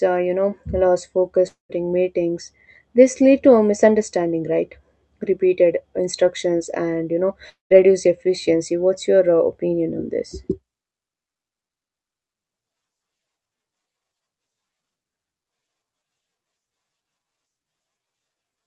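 At 1.47 s and again at 7.49 s the speech breaks off for about a quarter second each time, what sounds like a long network dropout, likely packets that never arrived. The last sound gets stretched into a fading buzz, then goes quiet for roughly the final 130 to 150 ms, and the speech picks up at 1.71 s and 7.72 s with about 220 ms simply gone. Through the Opus call path, highs stop around 8 kHz.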